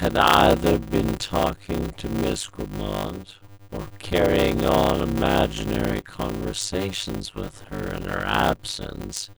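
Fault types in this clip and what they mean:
Block size mismatch (padded): The speech carries a steady 100 Hz buzz throughout and runs slow, at about 0.53 times normal speed, while the timbre stays. One stage hands over shorter blocks than the next stage takes in, and the shortfall in each block is filled with silence. Each gap adds one buzz cycle, and the stretching fits 256-sample writes padded out to roughly 480 samples.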